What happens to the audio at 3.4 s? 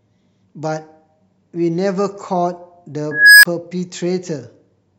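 At 3.4 s the speech is swamped by an unstable filter, running from 3.11 to 3.45 s. A recursive filter's feedback loop has gone past stability, so a squealing tone around 1.5 kHz swells over about 320 ms, clips, then collapses into a silence of about 23 ms as the arithmetic overflows. On a spectrogram it shows as a bright horizontal line that thickens; the waveform balloons into a flat-topped block, then drops to a flat gap.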